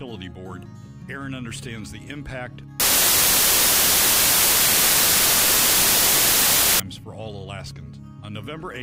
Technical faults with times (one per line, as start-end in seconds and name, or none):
2.80-6.80 samples built from the wrong bytes